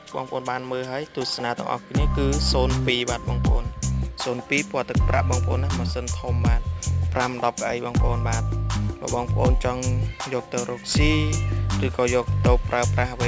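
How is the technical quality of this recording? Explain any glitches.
No glitches or dropouts occur anywhere, and there's nothing on the recording that needs explaining.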